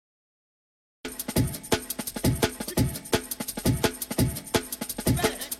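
From 0 to 1.05 s the audio is digital silence, then sound enters abruptly mid-event: a cut-off start, where capture began late. Unlike a gate or fade-in, there is no rising attack, and unlike a dropout, nothing preceded the gap.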